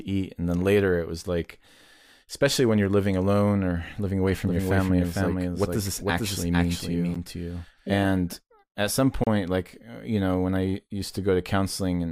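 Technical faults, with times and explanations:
4.32 to 8.33 s, doubled audio track: a second full-band copy of the speech sits about half a second behind the original and a few dB quieter. It has no reverb tail or room colour, so it sounds like a clean echo of itself rather than a real space, and it cuts in and out abruptly at those two edges. The likely cause is the same audio reaching the mix twice, once through a slower path.
7.14 s and 9.24 to 9.27 s, gap at a join of encoded pieces: the speech briefly breaks off, for about 13 ms the first time and 31 ms the second, then picks up exactly where it left off. The edges are smeared, as codec edges tend to be. That's what you get when separately encoded chunks are butted together untrimmed, so the encoder's start-up delay and end-of-stream padding stay in as dead air.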